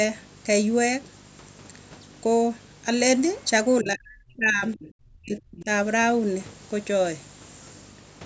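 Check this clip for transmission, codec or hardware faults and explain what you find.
Three faults stand out in this speech clip: a display buzz running through the whole recording, brief leaks of the far-end voice, and two stretches where the talker's speech is pushed down during double talk.

Video or display buzz runs from start to finish. It is a 50 Hz buzz at the picture's field rate, with hash stacked above it and a thin, high whine at 15.6 kHz, the line rate. It sits at roughly 20 dB below the speech, so it stays audible in every gap. A screen or its cable is coupling interference into the audio path. On a spectrogram it shows as a comb of harmonics spaced 50 Hz apart, plus a single steady line near 15.6 kHz. The waveform carries a small periodic ripple even during silence.

The other side's voice leaks through in three short scraps: 3.37 to 3.50 s, 4.82 to 4.89 s and 5.59 to 5.64 s. 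The first is very faint, well below the speech. The later two are stronger, the last about 20 dB under the talker. This is likely residual echo: the far-end voice played from a loudspeaker reached the microphone and was not fully cancelled. A spectrogram shows small, separate islands of harmonic energy that do not follow the talker's own contours.

Speech is suppressed in double talk from 3.81 to 4.80 s and from 5.00 to 5.67 s. The talker's voice dips, loses its upper range and drops out in pieces, with the deepest cuts around 35 to 40 dB. The echo leaks at 4.82 and 5.59 s sit right against these stretches, which fits a canceller that likely lost track of the echo while both sides were talking and turned everything down. The waveform envelope collapses in chunks, and the spectrogram shows speech bands breaking up or vanishing. The call's microphone processing band-limits the audio to nothing above 8 kHz, and its high-pass removes the lowest bass.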